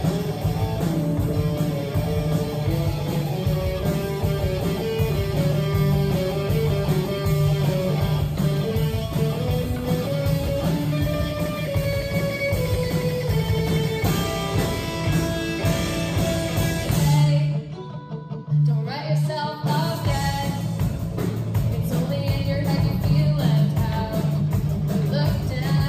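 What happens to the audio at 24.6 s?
Nothing goes wrong at 24.6 s; the audio plays through intact at that moment.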